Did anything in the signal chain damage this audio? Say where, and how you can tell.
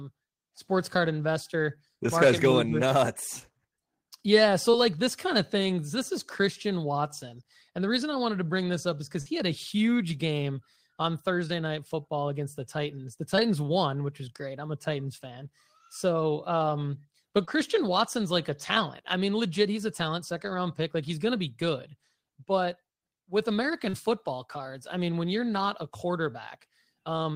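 Yes, the damage comes from the network stage of a call: short concealed packet loss at 3.39 s, 4.71 s, 13.36 s, 17.45 s and 23.89 s. Each time, 20 to 40 ms of speech failed to arrive and the decoder synthesised a patch of 16 to 41 ms by extending the preceding sound, producing a brief smear or wobble. On a spectrogram, harmonics run flat and unnaturally steady across the gap. The waveform shows a repeated cycle where detail should change.

A burst of packet loss occurs at 9.21 to 9.28 s, where about 40 ms went missing and 45 ms of concealment replaced it. The receiver continued the last sound while lowering its level, so it is heard as a held buzz or fading hiss, after which speech resumes further on with content skipped. On a spectrogram this appears as a smooth, frozen band that decays. The waveform envelope shrinks steadily before normal modulation returns abruptly.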